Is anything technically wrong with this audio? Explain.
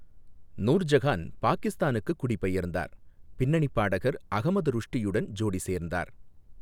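No, nothing stood out on listening to this speech recording.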